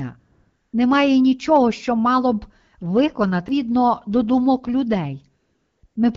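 AMR comfort noise appears first from 0.19 to 0.73 s, a gap of 540 ms. The phone's voice activity detector decided the talker had stopped, so it sent no speech frames. The receiving end filled the pause with synthetic noise built from a rough estimate of the background's level and spectral shape. The real room sound is replaced by a smooth, even hiss that switches on and off at the edges of the gap. This gating can also clip a soft word ending.

A CD skip occurs at 3.48 s. The laser jumped to a different turn of the disc's spiral, so the player muted for a very short moment and resumed from another point in the recording. It sounds like a small tick followed by an abrupt discontinuity, with the speech landing somewhere it should not, instead of flowing on from where it was.

AMR comfort noise returns from 5.41 to 5.83 s (420 ms) and again from 5.85 to 5.95 s (100 ms). These are two separate non-speech stretches split by a brief moment of real signal. 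In each, the background changes to the same steady synthetic texture, and the flip between genuine and generated noise is audible at each boundary. Through all of this the wideband phone codec carries the speech with only light coding damage, which fits a rate of about 12.65 kbit/s.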